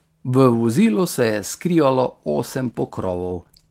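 From 2.66 s to the end, a call bitrate drop pushes the encoder from 32 to 15 kbps for about 1.05 s. Coarser coding leaves the speech rough and watery but unbroken, without the gaps or clicks that packet loss would leave.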